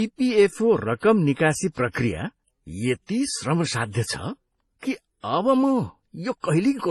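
Speech throughout, and the whole thing carries a mix of codec smearing and swirly, watery high end, with nothing at all above 12 kHz. That stacked character points to transcoding between lossy codecs, likely a low-rate MP3 later re-encoded to HE-AAC, each pass adding its own damage.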